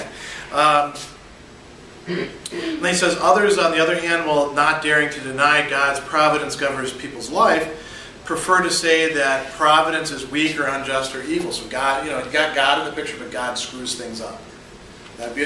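Listening through the recording, nothing stood out as a technical problem at any point.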